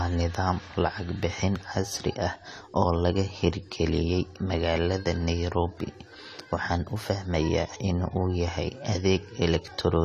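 Throughout, the speech sounds dull and smeared, with nothing above 14 kHz. This is likely AAC compression at a low bitrate, which fits about 32 kbps.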